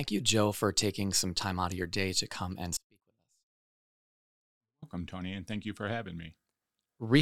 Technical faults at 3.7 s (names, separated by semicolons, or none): audio dropout to a faint residue